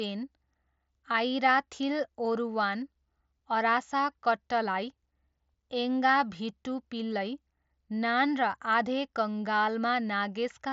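No technical faults can be heard in the speech. It has passed through a Bluetooth mSBC headset codec, so nothing reaches above about 7.7 kHz, and the codec leaves only light traces on the sound.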